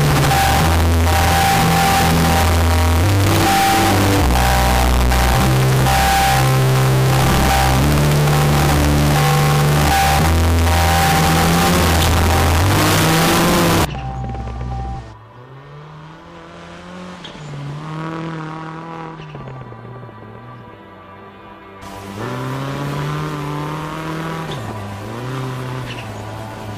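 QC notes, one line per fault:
0.00–13.85 s, float read as integer: 32-bit float samples were likely read as 32-bit integers, so the waveform turns near-square at a high, nearly fixed level, loud and harsh.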